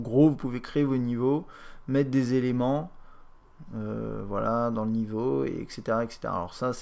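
Nothing in the audio stood out as a technical problem on listening.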